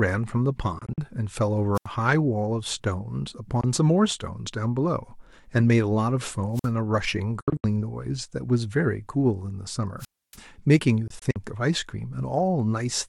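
A speech recording with two separate kinds of interruption, taking turns through the clip.

First, the Bluetooth dropout kind: short holes with abrupt or briefly faded edges where the sound just stops and picks up later as though it had kept playing underneath. These fall at 0.79–0.98 s (about 93 ms missing, broken up across roughly 186 ms, longest gap 46 ms), 3.61–3.64 s (a single 23 ms hole, which fits one lost packet), 7.41–7.64 s (the worst, about 163 ms gone across 232 ms, longest gap 70 ms) and 11.08–11.36 s (93 ms missing across 279 ms). The chopped, stuttering pattern points to the likely cause being packets not reaching the headphones in time.

Second, there's wireless microphone squelch dropout: the radio link fades, hiss rises briefly, then the receiver's squelch mutes everything to near silence until the signal recovers. You get that at 1.75–1.86 s (about 81 ms muted), 6.53–6.69 s (about 50 ms) and a long one at 9.99–10.37 s (about 284 ms).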